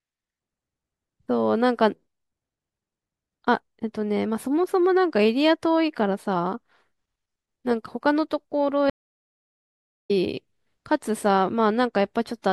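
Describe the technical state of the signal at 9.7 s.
Stream reconnect, from 8.90 to 10.11 s: at 9.7 s the signal is simply absent, sitting inside a gap of about 1.14 s. The connection dropped, the player fell silent while it re-established the link, then started a fresh decoder partway through the stream. When the speech returns just after 10.1 s, it picks up at a later point, roughly a second ahead of where it broke off, so that stretch of the speech is skipped.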